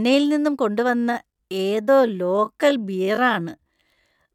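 From 0.87 s to the end, the speech becomes a time-stretched section: the pace drops to about 0.68 times normal while pitch holds, likely from software padding the audio by repeating short pieces. It sounds dragging, and a spectrogram shows harmonics drawn out, with duplicated waveform cycles.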